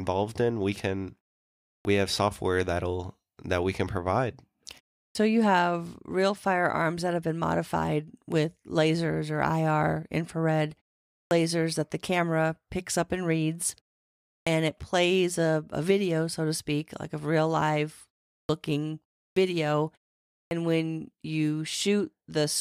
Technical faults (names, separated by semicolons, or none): clipped start after a pause